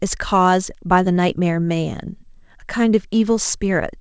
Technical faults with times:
none

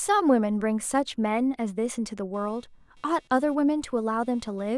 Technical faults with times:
2.34-4.77 computer activity noise

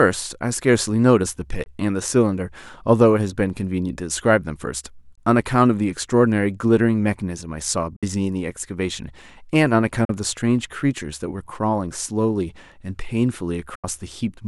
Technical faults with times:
1.64-1.67 Bluetooth dropout
5.15-5.18 Bluetooth dropout
7.96-8.03 Bluetooth dropout
10.05-10.10 Bluetooth dropout
13.75-13.84 Bluetooth dropout

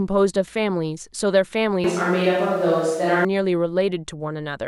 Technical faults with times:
1.84-3.25 switch to a distant microphone

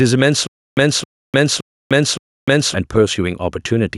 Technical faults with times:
0.00-3.97 gain pumping
0.47-2.74 stutter with silent gaps

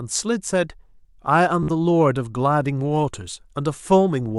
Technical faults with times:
1.63-1.69 Bluetooth stutter

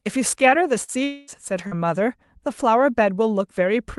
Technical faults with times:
0.83-0.91 burst of packet loss
1.04-1.30 long network dropout
1.67-1.74 short concealed packet loss

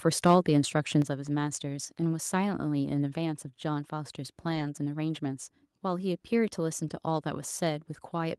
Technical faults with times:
1.02 microphone volume stepped down
2.03-2.05 lost packet rebuilt from error correction
4.51-4.61 lost packet rebuilt from error correction

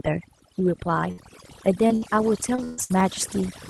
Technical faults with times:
0.00-3.70 overdone noise removal
0.60-3.60 clock drift buffer slips
1.11-1.21 burst of packet loss
1.18-1.20 lost packet rebuilt from error correction
1.88-2.92 repeated packet loss (robotic sound)

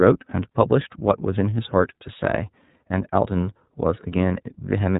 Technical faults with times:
0.00-4.99 iLBC codec

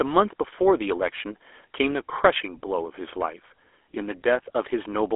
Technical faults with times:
0.00-5.16 GSM full-rate codec

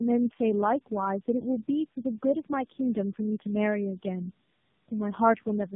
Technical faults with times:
0.00-5.75 tandem speech coding

